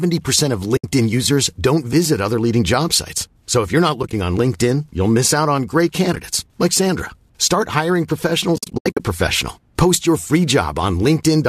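Speech with AAC frame loss with muting at four points: a 70 ms hole from 0.77 to 0.84 s, just before "users don't visit other"; brief scattered gaps across about 100 ms from 4.03 s, after "if you're not"; similar short gaps across about 80 ms from 6.13 s, after "miss out on great"; and a longer broken stretch from 8.56 to 9.00 s, with about 300 ms missing in total.

The short 10 ms length of each dropped frame fits the low-delay AAC frame size, and the light coding texture heard throughout is likely from AAC-ELD at 64 kbps. Each hole fades out and back in over roughly one frame, and what fills it is silence. That sets it apart from loss concealment, which would patch the gap with repeated or stretched sound.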